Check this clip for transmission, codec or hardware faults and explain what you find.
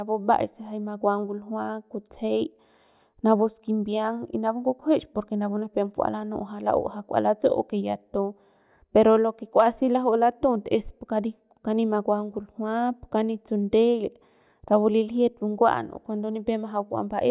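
Nothing stood out on listening; no transmission, codec or hardware problem is audible anywhere in the recording.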